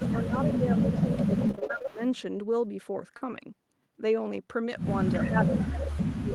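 From 0.0 to 2.0 s the speech dips by up to about 10 dB for roughly one and a half seconds in total. This is likely speech suppressed in double talk, with the echo canceller turning down this talker while the far side spoke.

A faint delayed copy of the voice, about 10 dB below it, appears briefly at 0.52 s and again from 0.74 to 2.2 s. This echo leak trails the original by 385 ms and was likely loudspeaker pickup that the far-end canceller failed to remove.

Between 1.43 and 1.89 s the sound turns choppy and robotic. This is repeated packet loss: a string of holes, the longest 21 ms, with about 30% of the stretch patched by extending the previous sound.

At 3.17 to 3.23 s a brief smear replaces about 40 ms of audio. This short concealed packet loss was filled by continuing the last sound until real audio resumed.

From 3.21 to 3.35 s the sound is rougher and noisier for about 80 ms. These lost packets were rebuilt from error correction, from low-bitrate copies carried in the following packets.

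From 5.21 s to the end, the speech drops sharply, by as much as about 35 dB, which again points to speech suppressed in double talk.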